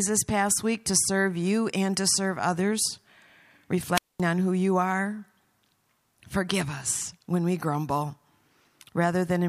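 At 3.94 s the speech breaks up in a wireless microphone squelch dropout lasting until 4.21 s. The radio link from an analogue FM transmitter weakened, so the receiver's output first rose into hiss and static. The squelch circuit then judged the signal too poor and muted the output, leaving a hole of near silence of about 0.22 s. The voice comes back as the receiver reopens, just before "on who you are".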